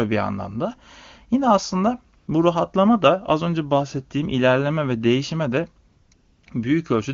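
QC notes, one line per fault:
2.17–2.27 s, 5.87–6.11 s and 6.13–6.43 s: AMR comfort noise. The phone treated these gaps as silence and sent no speech frames. The receiver filled them with smooth synthetic noise that is steadier than the real background. It switches in and out at each edge.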